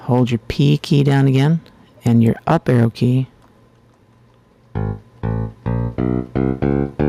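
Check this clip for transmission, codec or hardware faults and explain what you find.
Two faults here: pumping level and flat-topped peaks.

Gain pumping runs through the whole clip. The level ducks by around 5 dB under loud moments, likely from excessive gain with a fast limiter.

Hard clipping hits at 0.13–0.21 s (about 2 dB over), 0.99–1.47 s (about 6 dB) and 2.08–3.04 s (about 7 dB). Overloaded peaks get sliced flat, adding high harmonics heard as crackle on the peaks.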